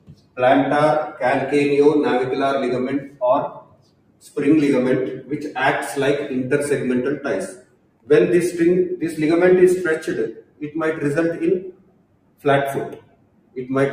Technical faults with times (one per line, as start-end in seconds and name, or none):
0.00-13.93 noise suppressor applied to music or sounds
0.00-0.38 sound cut by the noise suppressor
3.00-3.22 sound cut by the noise suppressor
3.48-4.36 sound cut by the noise suppressor
7.51-8.10 sound cut by the noise suppressor
10.32-10.69 sound cut by the noise suppressor
11.60-12.45 sound cut by the noise suppressor
12.96-13.57 sound cut by the noise suppressor